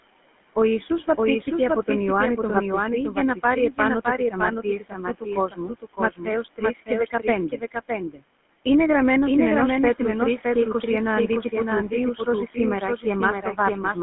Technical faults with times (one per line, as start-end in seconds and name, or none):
0.00-14.02 doubled audio track
0.00-14.02 GSM full-rate codec
3.15-3.79 speech cut by the noise suppressor
4.18-8.23 speech cut by the noise suppressor
13.42-13.58 speech cut by the noise suppressor